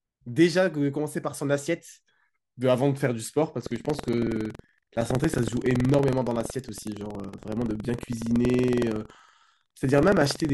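A speech recording that, from 3.58 s to the end, takes on a robotic rattle at 21.5 Hz that sounds only while speech is present. This is buffer tearing: the writer and reader of the playback buffer have slipped, so a small slice of each period replays audio about a tenth of a second old, with hard joins at a rate that fits a 2048-sample buffer.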